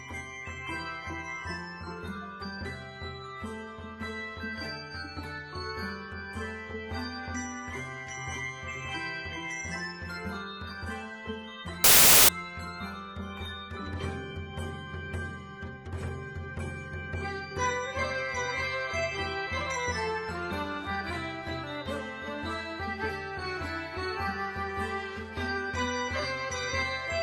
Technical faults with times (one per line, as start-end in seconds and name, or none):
11.84-12.29 samples built from the wrong bytes